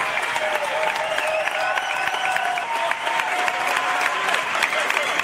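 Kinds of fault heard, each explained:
Skip ahead: at 2.64 s roughly 0.7 s of audio is dropped while later audio waits, so playback jumps forward and joins both sides with no gap.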